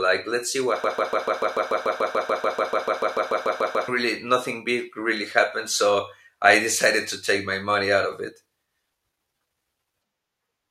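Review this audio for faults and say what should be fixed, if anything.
A broken-record loop runs from 0.84 s to 3.88 s, right after "let's see what". A fragment about 146 ms long repeats exactly, back to back, 21 times. Normal speech resumes at "really nothing big really". The player, encoder or stream likely stalled and kept resending the last fragment it held. The speech that belonged in those three seconds is lost. To prevent it, make the player or stream output silence on an underrun rather than replay its last buffer.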